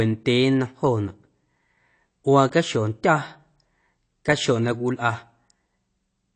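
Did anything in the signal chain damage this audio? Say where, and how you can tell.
Yes, at the codec stage: nothing above 8.6 kHz, with smeared, warbling sibilants throughout, likely AAC compression at roughly 32 kbps. A plain low-pass filter would dull the sound without adding warble.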